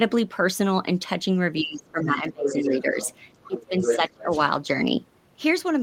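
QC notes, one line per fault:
1.61–2.99 s and 3.48–4.31 s, speech suppressed in double talk: likely the echo canceller couldn't separate the talker from loudspeaker echo while both spoke, so the voice dips by up to about 20 dB.
1.85–1.91 s, 2.47–2.76 s, 3.01–3.20 s and 3.43–4.40 s, other side's voice leaking through: likely residual loudspeaker echo left in the microphone, heard as a second voice ranging from faint scraps to roughly the talker's own level.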